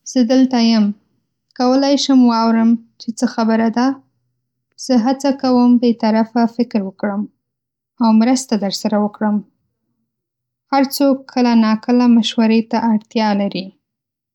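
No technical faults are audible anywhere in the speech recording.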